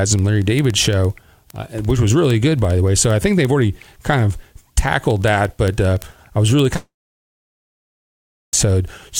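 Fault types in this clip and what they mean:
Word clock ticks: Sharp ticks repeat at a steady rate of about twenty per second from 0.13 s to the end. Their strength is uneven. The receiving device runs on its own clock, which is off from the sender's by a few hundred parts per million. Each time the two clocks slip past each other, one sample is dropped or repeated. That tiny break in the waveform makes each tick.
Short concealed packet loss: At 6.74 s there is a brief smear lasting about 15 ms. Around 10 ms of audio never reached the decoder in time. The receiver covered part of the hole by extending the preceding sound for a few milliseconds, then blended back toward the real signal. The result is a short blur, not a clean gap, right where the longer break begins.
Long network dropout: From 6.76 s to 8.54 s, about 1.8 s of audio is missing. The cause is likely a network dropout in which no packets arrived. 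The last sound is first stretched into a fading artificial tail. Then roughly 1.6 s of near silence follows. The audio returns at 8.54 s without the missing stretch, so the sound simply jumps ahead.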